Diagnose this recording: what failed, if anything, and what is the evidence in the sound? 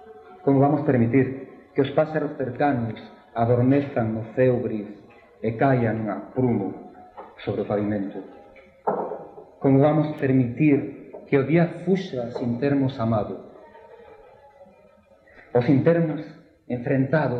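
A bit error spike points to a fault in storage or on a digital link: one flipped bit in a single sample at 10.19 s made its value leap by a power of two and snap back, producing one sharp, broadband tick at about -26 dBFS, unrelated to the surrounding sound.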